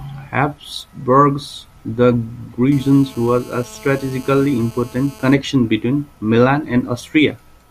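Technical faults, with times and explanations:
2.72–5.34 s, GSM phone buzz: a 2G handset close to the recording chain was on a call, transmitting in bursts about 217 times a second, and the audio circuitry rectified those radio pulses into the signal path. The result is a hard, raspy buzz at 217 Hz, rich in harmonics, sitting about 23 dB below the speech. It holds steady for those 2.6 seconds regardless of what is being said.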